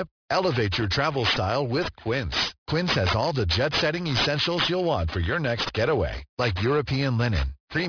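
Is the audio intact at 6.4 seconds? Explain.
No. Aliasing runs through the whole speech clip: downsampling without an anti-alias filter folds energy above 5.5 kHz back as strong, gritty, metallic sibilance.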